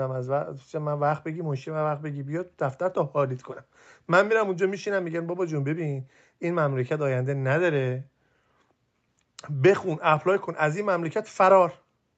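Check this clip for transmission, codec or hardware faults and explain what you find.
Nothing wrong turns up here; the speech just has the ordinary feel of a call, with the microphone processing trimming away the deepest bass and the Opus call path holding everything below about 8 kHz, much as that setup normally does.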